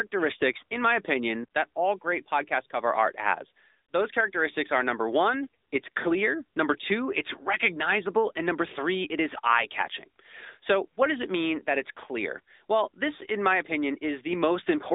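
AMR narrowband mobile codec damage runs throughout this speech. It sounds like a 2G or 3G phone call: nothing above 3.8 kHz, little below 250 Hz, and a plainly buzzy, synthetic edge. That fits a vocal-tract model rebuilt from sparse pulses at about 10.2 kbps.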